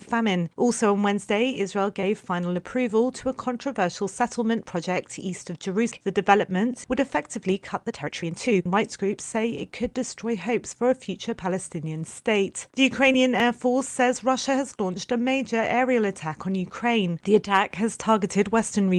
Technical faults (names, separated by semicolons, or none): skip ahead; jitter buffer speed-up